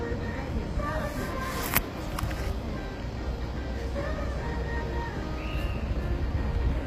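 HE-AAC compression is plainly audible throughout the clip. Nothing reaches above about 15.5 kHz, and the treble that remains sounds synthetic, with a gritty, metallic edge on hissy and noisy detail. This is likely the result of spectral band replication: only the lower spectrum is truly coded, and the top is patched together from copied lower bands under a coarse envelope, so upper harmonics fail to line up. The damage fits a low bitrate around 24 kbps, as used by HE-AAC v2.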